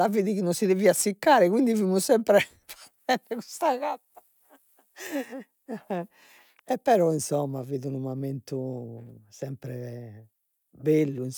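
Speech carries sample clock jitter throughout: a grainy hiss rides on loud, bright syllables at about 35 dB below the signal and vanishes in pauses, unlike a steady noise floor. It fits converter clock timing wandering by around 3 microseconds.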